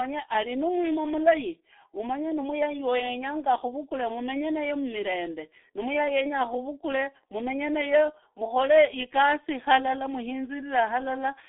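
Speech coded throughout with the G.723.1 codec sounds muffled and hoarse with smeared consonants, fitting a 6.3 kbit/s stream; a spectrogram shows a 300 Hz to 3.6 kHz band and nothing above 3.8 kHz.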